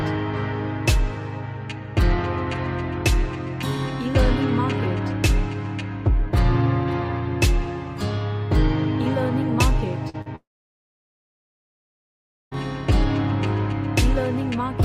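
At 10.09–10.16 s and again at 10.22–10.28 s, about 40 ms of audio failed to reach the decoder in time, twice. This is short concealed packet loss: the receiver extended the preceding sound to cover each gap, leaving two brief smears or wobbles in quick succession.

From 10.36 to 12.53 s, a likely long network dropout cut off incoming audio for about 2.16 s. The concealment briefly carries the last sound forward before it fades. Roughly 2.08 s of silence follows, and the sound resumes without the lost stretch.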